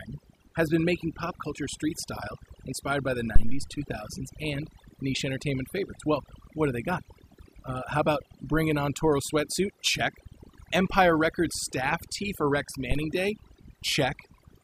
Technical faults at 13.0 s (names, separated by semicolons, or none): overdone noise removal; phantom power thump